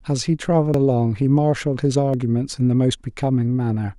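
At 0.74 s the speech jumps forward, losing roughly 50 ms with no gap of silence, and at 2.14 s a smaller skip drops about 20 ms. Both are likely dropped buffers from an overrun: the recording software fell behind, the audio hardware overwrote a block before it was read, and the audio on either side of the missing piece was joined directly, so the sound lurches ahead.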